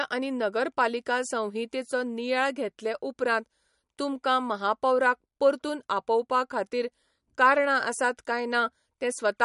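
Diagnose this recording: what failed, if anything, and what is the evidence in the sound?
Throughout, the speech sounds watery and swirly with nothing above 11.2 kHz: likely codec-stage MP3 compression near 50 kbps, zeroing weak frequency lines.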